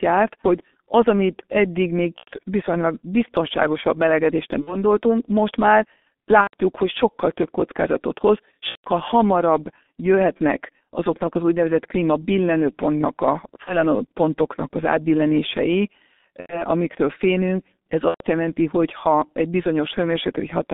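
From the start, the speech is squeezed through a G.723.1 codec, so it sits in a narrow phone band of roughly 200 Hz to 3.6 kHz. The damage is heavy: muffled, hoarse, smeared consonants, which fits the codec's 6.3 kbit/s mode and its slow-updating voice model.

On top of that there's VoIP packet loss concealed by the speech codec at 2.18, 4.61, 6.41, 8.69, 13.64, 16.40 and 18.08 s. Each time, the decoder guesses from its last pitch and filter, giving a fading buzzy tone or coloured noise. Gaps run 30 to 150 ms, which fits one to five 30 ms frames, and the voice stays weak briefly afterwards.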